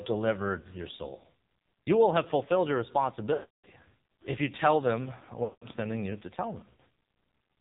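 The speech passes through the AMR narrowband mobile codec at a low mode, probably near 6 kbps. Nothing above 4 kHz survives, and the heavy coding leaves the speech buzzy and synthetic.

Lost AMR speech frames cause the decoder to repeat the last good settings at falling gain. At 0.60 to 0.68 s, just before "your soul", a 40 ms loss gives a brief warbling dip. From 3.34 to 3.66 s, between "will have fulfilled your" and "if you tell them", the sound drags out and fades to silence. From 5.44 to 5.68 s, between "if you tell them" and "sending you to tell", the sound stretches and fades again before returning rough.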